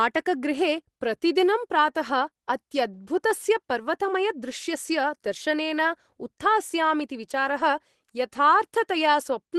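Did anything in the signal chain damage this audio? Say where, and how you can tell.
No, nothing in the chain damaged this speech.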